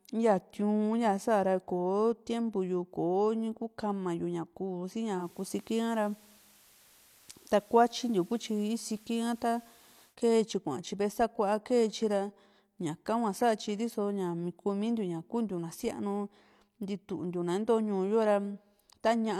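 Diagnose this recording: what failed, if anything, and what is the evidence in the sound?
The hybrid radio's reception stage lost the digital stream and fell back to the FM broadcast of the same station. That was a digital radio blending to analogue event. At 5.15 s a 128 ms cross-fade brings up the FM path, audible as hiss sitting roughly 30 dB under the speech and a level shift of about 2 dB. At 10.16 s the receiver blends back to digital and the hiss clears.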